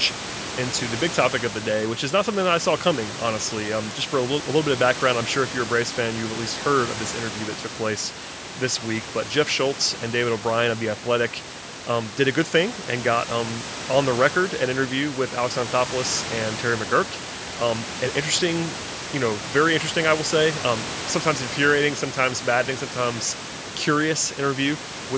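Nothing stood out on listening to this speech: the call microphone processing leaves no content above 8 kHz, as expected, and the room noise sits about 14 dB below the voice.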